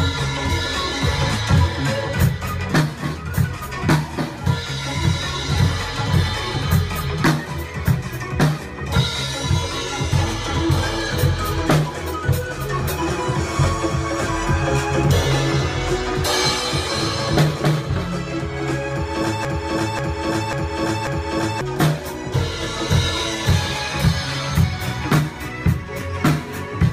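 The player or stream likely stalled at 19.45 s, resending its last fragment: a broken-record loop of about 540 ms repeats four times until 21.61 s, replacing the audio.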